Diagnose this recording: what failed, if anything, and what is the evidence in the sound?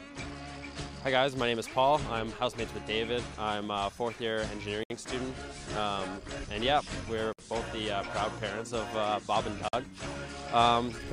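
Sound cuts out at 4.83 s (67 ms), 7.33 s (58 ms) and 9.68 s (47 ms), then resumes: codec-stage gaps at joins of encoded pieces, untrimmed encoder delay and padding.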